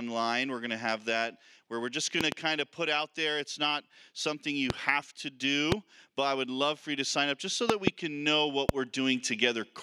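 Loud pops land at 2.21–2.34 s (a double), 4.70–4.72 s, 5.72–5.74 s, 7.70–7.90 s (another double) and 8.69–8.71 s, jumping roughly 20 to 25 dB above the sound, which keeps going underneath. Likely a voltage spike from a switch, plug or static.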